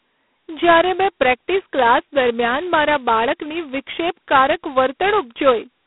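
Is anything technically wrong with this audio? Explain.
Yes, there is G.726 ADPCM damage throughout. Each sample is coded as a coarse difference from a predicted value. The rasping hiss that swells and fades with the speech level fits 16 kbit/s, just 2 bits a sample. That hiss sets it apart from a clean telephone band-limit, which shows the same 250 Hz to 3.4 kHz band and nothing above 3.9 kHz.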